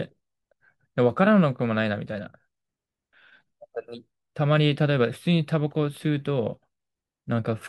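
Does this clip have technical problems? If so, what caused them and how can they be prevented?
No, no technical faults heard.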